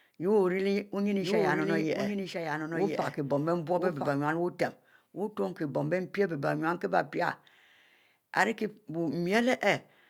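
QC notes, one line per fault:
1.22–4.08 s, doubled audio track: a full-band copy of the speech sounds about a second late, around 5 dB quieter, dry and with abrupt start and stop, likely from a second capture path or misaligned edit. Spectrogram shows identical patterns repeated one second later, hard-edged.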